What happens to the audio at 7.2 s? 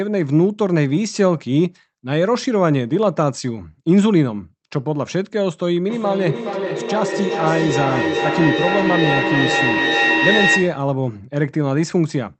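At 7.2 s the speech is caught in a feedback echo between two devices, which runs from 5.9 s to 10.96 s. Each phrase comes back roughly every 0.4 seconds, thinner and more ringing each pass. The repeats reach about the same level as the speech itself, so they stack up instead of fading. A second device in the same room is playing this call aloud, and this microphone picks that playback up and sends it round the loop again. The echo canceller only removes what its own device plays.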